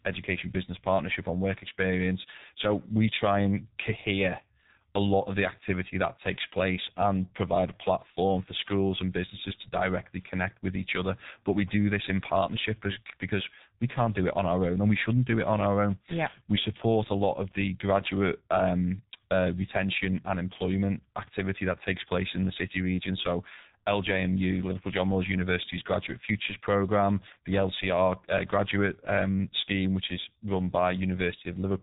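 From start to finish the speech carries heavy G.723.1 codec damage. Nothing above 3.8 kHz survives, and at 6.3 kbit/s the coarse 30 ms frames leave the speech muffled and hoarse. Consonants smear together because the codec updates its vocal model too slowly to follow them.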